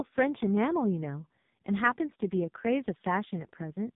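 From start to finish, the speech carries the sound of the AMR narrowband mobile codec. The audio was squeezed through a phone-style speech coder. Nothing above 3.8 kHz survives, so sibilants lose their edge and the sound is boxy. The damage is heavy. The voice turns buzzy and synthetic. That points to one of the codec's lowest modes, around 5 kbps. Too few bits reach the vocal-tract model to rebuild the voice cleanly.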